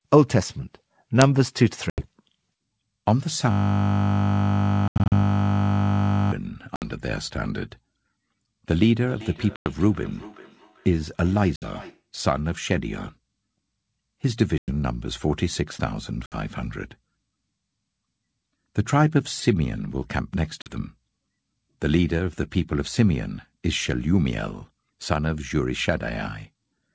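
At 1.90 s an 80 ms gap opens: packet loss on an ADPCM call. Silence replaces the missing packets, and the desynchronised predictor leaves the speech slightly distorted on resumption. The same happens at 4.88–5.13 s (160 ms scattered), 6.76, 9.56, 11.56, 14.58, 16.26 and 20.62 s. From 3.51 to 6.32 s a system hang loop repeats one 20 ms buffer 140 times, a steady 50 Hz buzz. From 9.05 to 12.08 s, feedback echo between two devices returns the speech roughly every 400 ms, at about −19 dB, thin and ringing.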